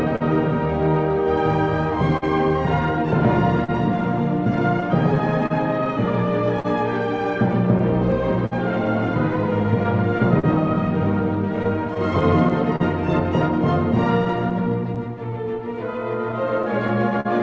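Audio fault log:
Throughout: clock drift between sender and receiver. The sending side's clock runs slow, by roughly 3 percent, so audio arrives a little behind the pace at which the receiver plays it out. The jitter buffer keeps drifting toward empty, and the receiver has to stretch or repeat short pieces to keep going. Small timing hiccups recur at uneven intervals across the whole clip, and the band stops at 8 kHz, which fits a wideband call codec such as G.722.
0.16–0.22 s: short stall from a late packet. A packet missed its playout slot and the buffer ran dry, so the receiver held the last sound for about 45 ms until the data arrived, then resumed from the same point. Nothing is skipped. Playback after this point runs about 45 ms later than before. The stretched portion is audible as a brief hold with a faint buzz or dip.
2.17–17.27 s: scattered short gaps. Around thirty isolated packets went missing or arrived late over this span, and each hole was patched by continuing the preceding sound. 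Concealment totals about half a second, or roughly 3 percent of the span, with no single patch longer than about 50 ms. Nothing is lost outright. The patches add about 39 ms to the timeline and are heard as brief ticks, smears and hiccups spread across the stretch.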